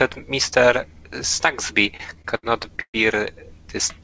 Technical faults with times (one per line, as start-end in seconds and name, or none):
1.97-2.97 repeated stalls (stutter)